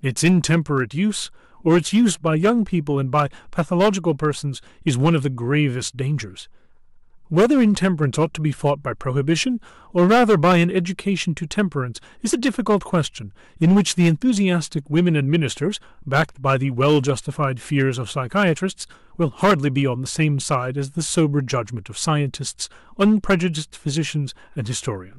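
Hard clipping runs through the whole recording. The speech was driven about 10 dB beyond what one stage in the chain could pass. The loudest peaks were sliced flat instead of rounding over. Only a small share of samples hit that ceiling, around two percent. Those squared-off tops create harmonics high in the spectrum. The result is a gritty crackle on the strongest syllables.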